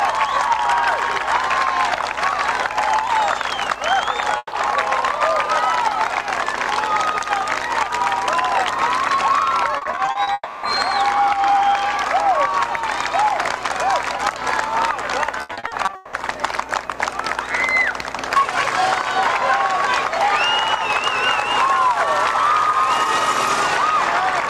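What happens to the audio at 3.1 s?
Nothing goes wrong at 3.1 s; the audio runs through that moment intact, with no dropout, glitch or other fault to be heard.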